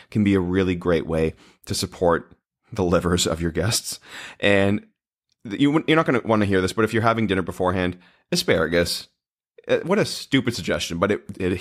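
No technical faults can be heard anywhere in the speech. Nothing in the recording calls for a timestamp or a correction.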